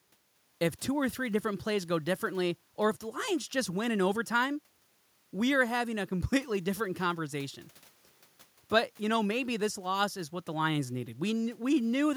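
The speech signal carries no audible technical faults at any point.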